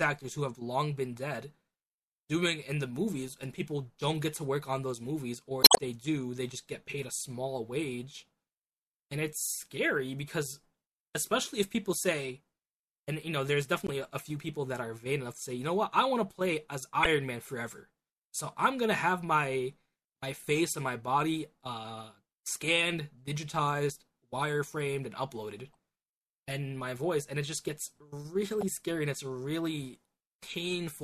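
Around 5.61 to 5.78 s the speech breaks into a glitch that stretches things by 16 ms. That's damaged data in a compressed stream: the decoder misreads corrupted frames and hunts for the next header. Shorter glitches follow at 13.87–13.89, 17.03–17.06 and 28.61–28.63 s.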